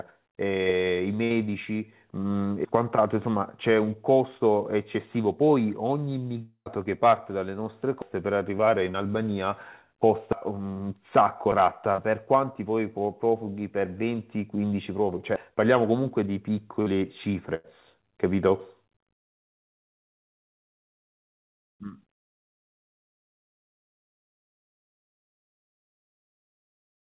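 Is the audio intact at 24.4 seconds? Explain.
Yes, the audio is intact at 24.4 seconds, with nothing there beyond the narrow telephone-style band of the call path, which stops at 4 kHz.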